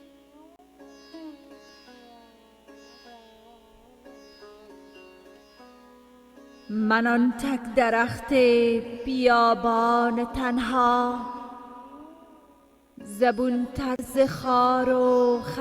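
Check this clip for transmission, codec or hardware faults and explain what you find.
Two blocks of digital silence occur, at 0.56 s and at 13.96 s, each lasting 30 ms. In both places a stretch of samples was replaced with zeros, which points to the output buffer not being filled in time. The sound drops straight to dead silence and returns with no fade. With a 30 ms gap, each one comes across as a brief hole.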